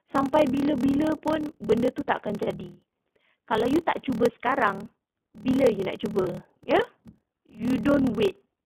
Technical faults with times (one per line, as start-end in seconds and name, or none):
0.00-8.66 iLBC codec
0.00-8.66 block size mismatch (padded)
2.43-2.48 lost iLBC frames
6.21-6.27 lost iLBC frames
8.56-8.59 lost iLBC frames